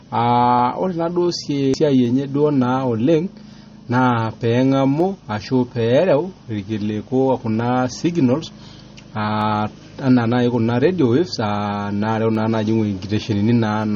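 From the start, the speech sounds watery and swirly, with smeared attacks and nothing above 8.3 kHz. This is likely MP3 compression at a low bitrate, which fits about 32 kbps. The starved encoder cuts the treble and lets weak frequency components flicker between frames.

From 0.59 s to 13.83 s, a regular click recurs every 1.47 s, about ten in all. These are likely clock drift buffer slips. Two clocks differing by roughly 100 ppm let the buffer drift until a few samples are dropped or repeated.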